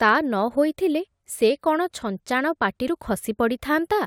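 At 2.87 to 2.89 s the speech has compressed frames skipped. The decoder never plays a short stretch of coded audio. The frames were either missing from the stream or rejected as damaged. About 20 ms of sound drops out, and the speech jumps ahead by that much.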